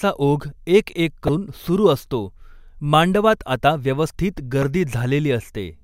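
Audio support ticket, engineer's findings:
Damaged data in a compressed stream, twice in this speech clip. First at 1.26–1.29 s, a short glitch of about 30 ms. Second a single brief glitch at 4.62 s. Probable component: the compressed file or transport, not the playback chain. Mechanism: bad bytes in the frames there, so the decoder misreads them, loses sync and hunts for the next frame header. Worth checking the source file or stream for corruption.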